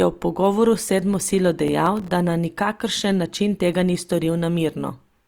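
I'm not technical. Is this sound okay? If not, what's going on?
No. From 1.68 to 2.10 s, after "sedmo silo", there's processor overload crackle: the computer repeatedly missed tiny audio deadlines, leaving brief silent gaps heard as gritty tearing.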